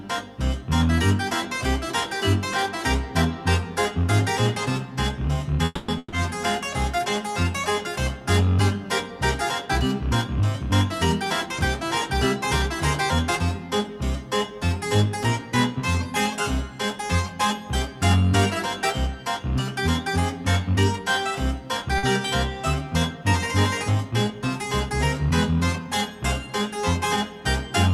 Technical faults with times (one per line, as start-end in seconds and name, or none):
5.65-5.90 call audio freeze
5.98-6.18 burst of packet loss
21.98-22.05 short stall from a late packet
24.04-24.40 jitter buffer speed-up